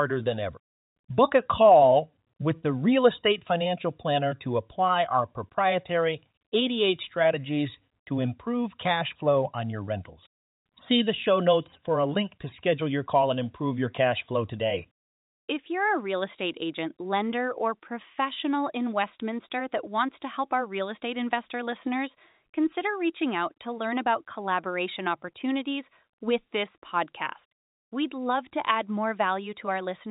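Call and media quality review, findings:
No faults found in this speech audio.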